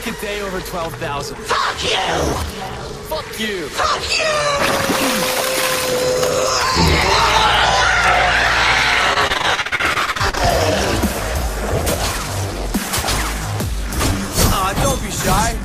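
The audio has repeated packet loss (robotic sound) from 9.13 to 10.41 s. Short gaps up to 43 ms are patched by repeating sound, leaving about a third concealed and choppy.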